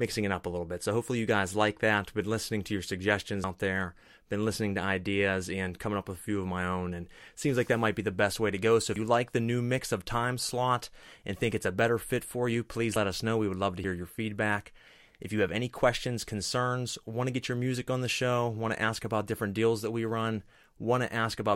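A speech clip with four abrupt skips, at 3.44 s, 8.96 s (just before "like the new mix"), 12.96 s (between "fit for you please" and "us know") and 13.84 s (between "would love to" and "your feedback"). Each is a jump, with the sound skipping ahead by roughly a tenth of a second or less, likely a dropped buffer (overrun). Unlike a dropout, no silent gap appears.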